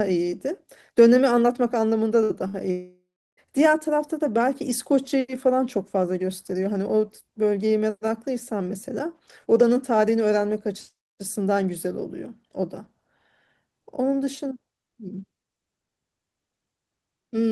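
At 2.23–2.33 s and 2.48–2.56 s, bursts of packet loss skip about 60 ms each; concealment holds a fading buzz or hiss, seen as smeared, decaying energy on the spectrogram. From 2.71 to 3.40 s a fading fill decays into about 0.35 s of flat waveform, likely a long network dropout, with roughly 0.66 s missing.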